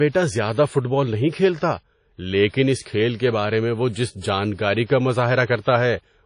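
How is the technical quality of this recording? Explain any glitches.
The recording has plainly audible codec damage throughout and four short pre-echo glitches.

Across the whole speech clip there is ringing, washy quantisation noise with a hiss that rises and falls with the signal, and nothing above 10.1 kHz. This is likely WMA compression at a low bitrate, around 32 kbps, where coarse quantisation over long transform blocks smears noise and zeroes weak high-frequency lines.

Pre-echo occurs at 2.49 to 2.54 s, 2.82 to 2.86 s, 4.85 to 4.90 s and 5.60 to 5.65 s, each spreading 41 to 52 ms ahead of a sharp onset. The codec spreads noise sized for the loud attack across the whole block, including the quiet moment before it, so a brief hiss comes before each attack and the attack itself sounds soft and smeared.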